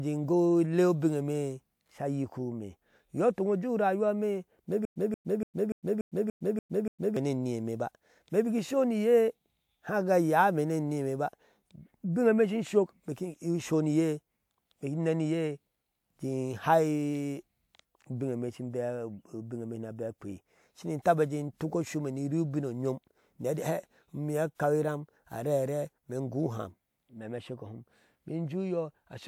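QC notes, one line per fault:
4.85–7.17 s, stutter with silent gaps: the same burst of about 182 ms plays eight times, each followed by about 108 ms of dead digital silence, so the repeats land at an even 290 ms pace. The likely cause is a playback or stream stall in which each retry replayed the last buffered fragment and then ran dry. Whatever audio belonged in those 2.3 seconds never arrives and is lost.
21.02–21.05 s, pre-echo: a short hiss rises over about 33 ms just before a sharp attack, and the onset itself sounds softened and smeared. A transform codec spread its quantisation noise across the whole block containing the attack. The noise budget was set by the loud transient, so it also covered the quiet stretch ahead of it, where nothing masks it and the hiss is audible.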